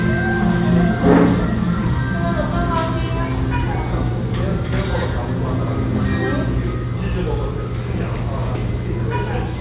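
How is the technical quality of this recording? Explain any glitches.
No audible glitches or faults.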